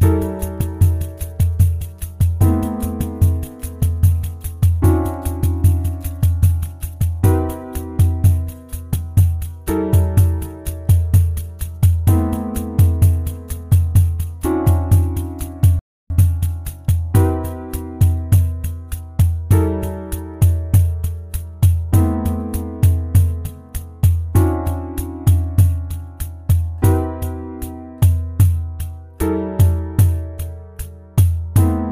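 At 15.79 s the player's download buffer ran dry, so playback halted in a rebuffering stall until more audio arrived at 16.10 s. The sound drops to silence for about 0.31 s, then picks up exactly where it stopped, with nothing missing but time added.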